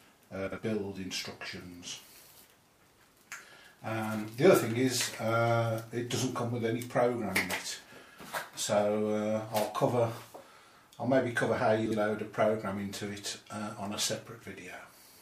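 Audio with frames out of order at 0.47–0.58 s and 11.86–11.97 s: two adjacent blocks of about 52 ms, fitting pairs of roughly 26 ms frames, were decoded swapped, producing a brief garbled flutter.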